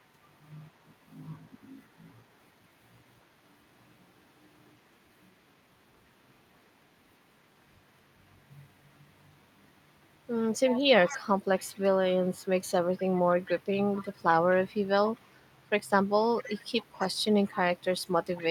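From the start right through to the end, there's an echo leak: a faint copy of the speech trailing about 255 ms behind, well below the main level. Likely a far-end loudspeaker whose echo canceller let some of its microphone pickup slip back down the line.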